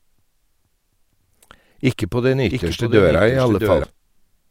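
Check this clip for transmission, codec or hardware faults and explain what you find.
There's one fault here, a doubled audio track running from 2.50 s to 3.84 s. In that stretch the speech is joined by a second full-band copy of itself, trailing about 0.7 s behind and a few dB quieter, with no reverb tail or room colour on it. It cuts in and out abruptly. The likely cause is the same signal reaching the mix twice, once through a slower path, so the two copies sit out of step.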